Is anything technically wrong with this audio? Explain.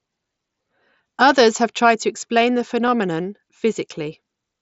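Yes. Concealed Bluetooth headset packet loss at 2.87 s, just after "tried to explain the": a 7.5 ms gap, consistent with one lost frame, was patched with repeated recent waveform, leaving only a faint blip.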